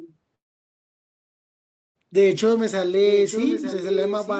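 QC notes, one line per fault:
0.35–1.97 s, long network dropout. The speech stops and about 1.6 s of it is lost. A brief fading tail gives way to near silence for about 1.58 s. Then speech resumes further on. This is likely packets failing to arrive.
3.05 s to the end, echo leak. A delayed copy of the speech trails the talker by about 0.9 s. It sits only a little below the direct sound. This is likely a loudspeaker echo that the far end's canceller did not fully remove.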